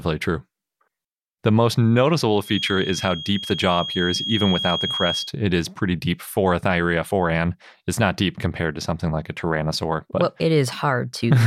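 From 2.42 s to 5.33 s, a feedback whistle sits behind the speech: a thin tone held at one pitch, 3.3 kHz, somewhere around 10 dB below the speech level, swelling and fading slowly rather than building into a howl. The likely cause is a loudspeaker-to-microphone loop running just short of instability, so that one high frequency keeps recirculating at a low level and rings on without ever running away.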